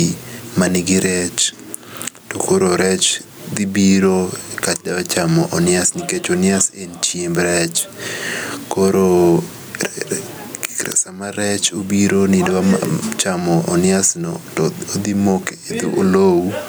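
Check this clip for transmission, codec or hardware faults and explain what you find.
Gain pumping runs through the whole recording, with a level swing of around 15 dB. Likely cause: input gain set far too high, with a fast limiter repeatedly clamping the speech, leaving it squashed.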